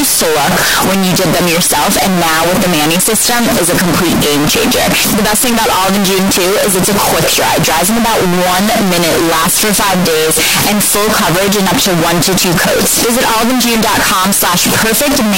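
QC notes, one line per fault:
Throughout, float read as integer: the speech is very loud and harsh from start to finish, with background noise as loud as the talking, yet the pitch contour can still be followed. This likely comes from 32-bit float samples being read as 32-bit integers, so the sign and exponent bits dominate each value and the waveform turns nearly square at an almost fixed, high level. Unlike ordinary clipping or overdrive, even quiet gaps are pushed up to that level.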